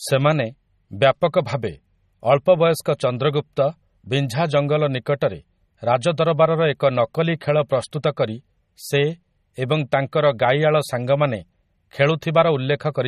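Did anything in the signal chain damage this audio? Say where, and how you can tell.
Yes, at the codec stage: throughout the speech, watery, swirly MP3 compression, likely from a low bitrate near 32 kbps; a spectrogram shows nothing above 14.4 kHz and flickering high bands.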